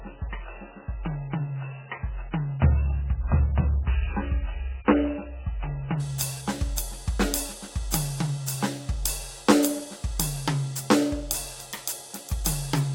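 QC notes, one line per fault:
0.0–6.0 s, adaptive stream starting at a low bitrate: the music opens dull and smeary, with nothing above 3 kHz and strong codec artefacts, as if the player began on a very low-bitrate rung; at 6.0 s the treble returns abruptly, with no gap or stall.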